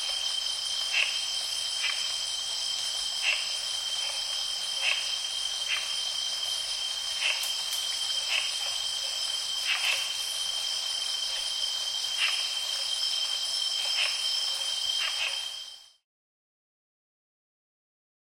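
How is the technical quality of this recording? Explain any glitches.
No glitches can be heard: the signal stays intact throughout, and the level falls away smoothly from around 15 s to silence at 16.06 s, the way an editor's fade-out would.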